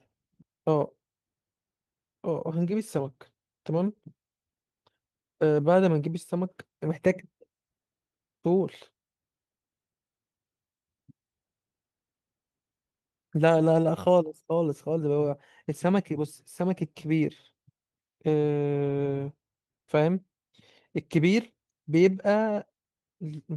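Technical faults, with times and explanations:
There are no technical faults in this clip, so there are no times or explanations to give.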